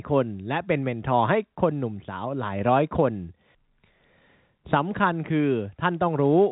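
Speech, with no technical faults to report.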